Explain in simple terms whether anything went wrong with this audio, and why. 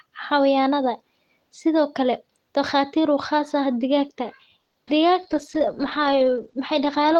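A call audio freeze occurs from 4.59 to 4.77 s. The sound briefly hangs as a fading buzz or hiss for about 0.15 s, then carries on. Packets were likely held up on the network, so the receiver stretched the last sound while it waited. Nothing was lost, but the audio now runs 150 ms later.

Short concealed packet loss occurs at 4.86 to 4.90 s. About 40 ms of sound never arrived in time. The receiver covered only a sliver by extending what came before, so you hear a quick smear or wobble, and the audio jumps ahead by roughly 30 ms.

A call bitrate drop starts at 5.22 s and lasts to the end. The connection seemed to weaken, so the sender squeezed the audio into far less data. Everything after that point sounds rougher and more muffled, with the brighter upper sounds gone above 8 kHz.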